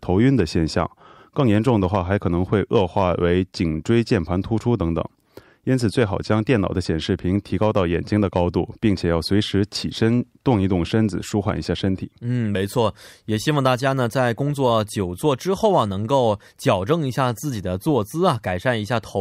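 A speech recording, with nothing technically wrong to point to at any time.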